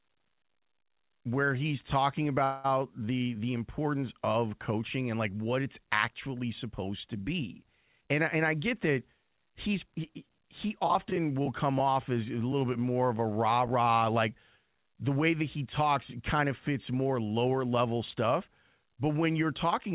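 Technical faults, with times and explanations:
2.44 to 2.66 s, call audio freeze: right after "where he's talking" the sound stalls and the last moment is stretched into a fading buzz for about 200 ms. Nothing is lost; the speech resumes where it stopped, likely because delayed packets left the jitter buffer empty.
8.01 to 9.94 s, jitter buffer speed-up: after "actually supposed to be" the speech runs at about 111% speed with unchanged pitch and sounds hurried. The receiver trimmed pitch-period pieces repeatedly, roughly 200 ms in total, to reduce excess buffered delay.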